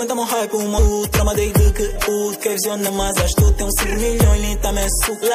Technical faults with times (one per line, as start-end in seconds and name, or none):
0.00-5.35 MP3 compression
5.21 compressed frames skipped